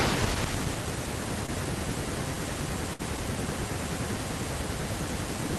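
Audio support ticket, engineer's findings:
Short concealed packet loss, 1.46–1.50 s: brief smear in the speech. Receiver-side concealment extended the preceding sound for about 15 ms over a 20 ms hole.

Burst of packet loss, 2.93–3.01 s: held sound that fades, then the speech jumps ahead. About 60 ms never arrived in time, and the jitter buffer and decoder synthesised about 57 ms, decaying.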